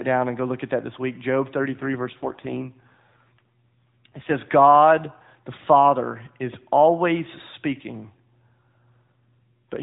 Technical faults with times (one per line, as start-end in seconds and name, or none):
1.58-4.34 AMR rate drop
9.16-9.82 AMR rate drop